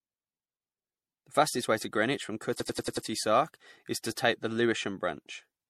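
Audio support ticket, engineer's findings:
Swirly, smeared, hollow speech throughout, with soft consonant attacks and a hard ceiling at 16.4 kHz. The cause is likely generation loss from repeated MP3 re-encoding, around seven passes, with a character that fits a 64 kbit/s MP3 chain. Each pass requantises on a shifted frame grid, so noise and spectral holes accumulate. On a spectrogram this shows as a flat cutoff at 16.4 kHz, patchy time-frequency holes, and smeared onsets.

System hang loop at 2.60–3.07 s: a machine-gun stutter at 10.8 Hz, with one 93 ms slice replayed exactly 5 times. Probable component is the audio driver or host stall, with the hardware recycling its ring buffer; the loop length fits a 4096-sample buffer. On the waveform, five identical copies of the same 93 ms block appear back to back, and the spectrogram shows vertical seams repeating every 93 ms.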